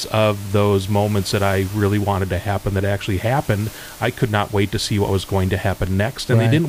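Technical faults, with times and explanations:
No technical faults found; the only background is the room's own noise, sitting about 21 dB under the speech and belonging to the recording itself.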